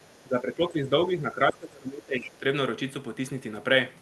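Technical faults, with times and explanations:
0.00–0.24 s, other side's voice leaking through: a faint second voice, about 35 dB below the talker, likely loudspeaker echo the canceller left in the microphone signal.
0.25–2.43 s, speech suppressed in double talk: the canceller likely mistook the talker for echo while both spoke, pulling the voice down by up to about 20 dB over roughly a second and a half.
1.49–1.53 s and 2.24–2.28 s, other side's voice leaking through: brief scraps of the far voice, about 15 dB below the talker, likely echo escaping the canceller during the suppression.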